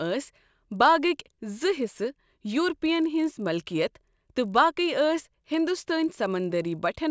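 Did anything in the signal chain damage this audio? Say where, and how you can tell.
Yes. The damage happens at the sample-rate conversion stage, where the resampler restarted on every block. A faint buzz at 50 Hz runs through the whole speech clip and rides on the signal. It drops away in the gaps. That rate means 20 ms blocks. The sound points to a 24 kHz to 16 kHz conversion. Each block was converted on its own, without its neighbours' samples at the edges. So every boundary carries a small error, and those errors repeat as the buzz.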